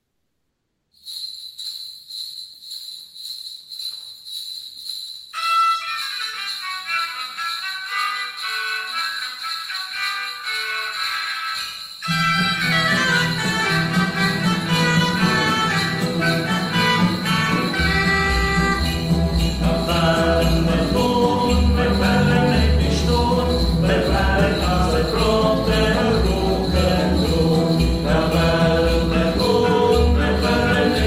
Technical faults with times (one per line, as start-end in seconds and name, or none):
0.00-0.91 comfort noise in place of the background